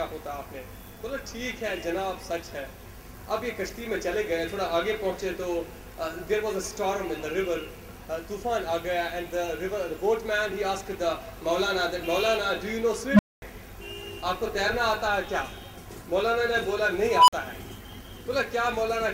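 An unstable filter fault occurs twice: at 13.10 s a tone near 200 Hz swells over 86 ms into clipping, then drops to 232 ms of silence; at 17.10 s a tone near 1 kHz builds over 181 ms before a 46 ms dropout, as the recursive filter's output runs away, overflows and resets.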